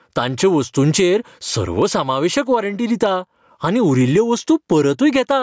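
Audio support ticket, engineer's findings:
Gain pumping, whole clip. Gain pulled down under each loud stretch of speech, swinging around 15 dB. Loud and soft parts squashed together. Likely mic gain set way too hot, with a fast limiter clamping each peak.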